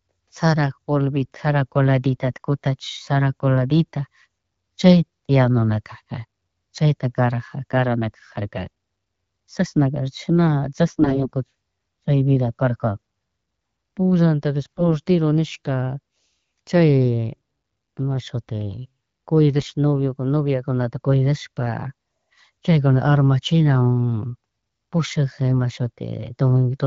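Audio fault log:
2.33–2.38 s, 10.86–11.30 s, 14.63–14.82 s and 19.60–19.72 s, AMR bit errors: The speech keeps roughly its pitch and loudness but turns hoarse, scratchy and gargly in these bursts, worst in the longest one near 11 s. Weakly protected bits in the codec frames arrived corrupted at around 10 to 15 percent of bits, so the decoder misplaced its excitation pulses and got fine pitch, gain and spectral detail wrong, while the clear wideband rendering around them fits AMR-WB at 12.65 kbit/s.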